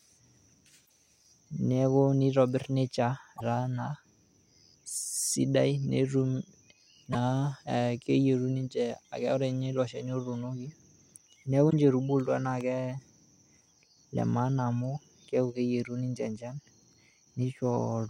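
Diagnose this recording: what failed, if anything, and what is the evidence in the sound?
Damaged data in the compressed stream (codec stage): the decoder loses sync on corrupt frames, leaving brief glitches at 0.82–0.90, 3.36–3.41, 7.09–7.15 and 11.67–11.74 s.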